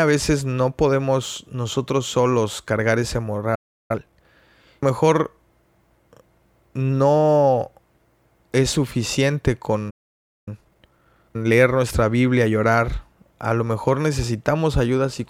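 The speech cuts out after "nosotros solos cargar ese" from 3.55 to 3.91 s and again from 9.90 to 10.48 s. Each is a playback stall, likely from the player starving for data. It is true silence that resumes mid-flow, not a dropout with noise. Time-compressed catch-up follows each stall, at 3.91–4.25 s (2× speed) and after "es suficiente" at 10.48–11.60 s (1.5× speed). The speech is rushed but keeps its normal pitch, unlike a simple speed-up, which raises pitch.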